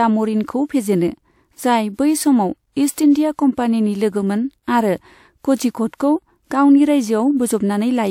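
At 2.92 s the transform codec hit a sharp attack sitting late in one of its blocks, and because it spreads quantisation noise evenly across the whole block, noise sized for the loud onset also filled the quiet stretch ahead of it. The result is pre-echo: about 59 ms of hiss, running to 2.98 s, that arrives before the attack itself, leaving the onset sounding softened and smeared rather than crisp.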